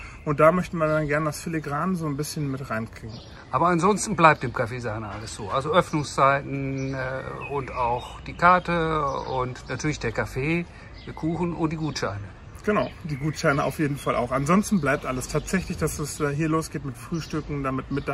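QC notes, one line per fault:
Nothing stood out on listening.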